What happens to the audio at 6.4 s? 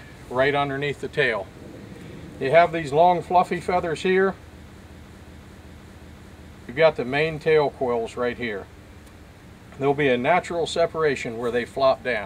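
At 6.4 s the audio is caught in a system hang loop running from 4.83 to 6.69 s: the hardware kept replaying one 0.37 s buffer, consistent with 16384 samples, five times at about 2.7 Hz. It sounds like a rhythmic stutter, and roughly two seconds of audio are lost. On a waveform or spectrogram, identical blocks repeat side by side.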